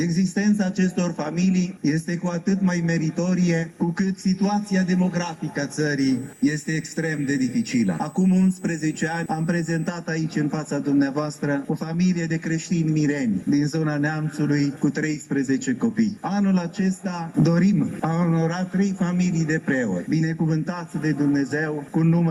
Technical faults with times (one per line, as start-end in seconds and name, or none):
5.98-9.89 USB whine